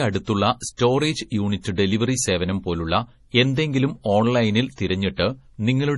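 From the start, the speech sounds watery and swirly. Nothing is heard above 11.3 kHz. This is heavy damage, likely from MP3 compression at a low bitrate near 32 kbps. Starved of bits, the encoder cuts the treble and drops weak detail.

Pre-echo appears three times. From 0.77 to 0.79 s, a short hiss comes before an attack. From 1.61 to 1.65 s, it comes just before "ഡെലിവറി സേവനം പോലുള്ള എന്തെങ്കിലും". From 5.15 to 5.18 s, it follows "സേവനം പോലുള്ള എന്തെങ്കിലും ഓൺലൈനിൽ". Each time, the codec spreads the attack's noise back across its block, so the attack sounds smeared.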